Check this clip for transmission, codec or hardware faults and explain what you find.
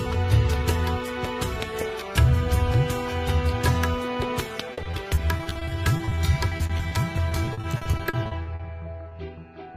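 There's packet loss here, in two bursts and then one small hit near the end.

Repeated packet loss (robotic sound) runs from 4.73 to 6.93 s and again from 7.29 to 8.61 s. Lots of short holes, none longer than 40 ms, got patched by stretching the previous sound, covering about a fifth and then nearly a third of each stretch. That gives a choppy, robotic texture with bits missing.

Short concealed packet loss shows up at 9.09 to 9.13 s. About 20 ms never arrived in time, so the receiver extended the last sound and faded back into the real signal. You hear a brief smear or wobble.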